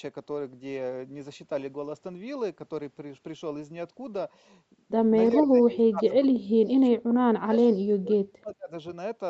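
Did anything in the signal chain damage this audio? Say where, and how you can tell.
Yes. The call's echo canceller likely treated both ends talking at once as loudspeaker echo and clamped the whole signal. The result is speech suppressed in double talk: the speech sinks by around 30 dB from 5.33 to 7.55 s, and by around 35 dB from 8.02 to 8.71 s.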